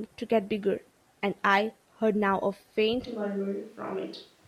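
From 3.08 s to the end, the signal from the close microphone has likely dropped out and the recording has fallen back to a microphone further from the speaker, a switch to a distant microphone. The change is sudden: the speech turns roomy and hollow, loses bass, and takes on a background noise floor roughly 30 dB below the speech. The overall level stays about the same, so only the character of the sound changes.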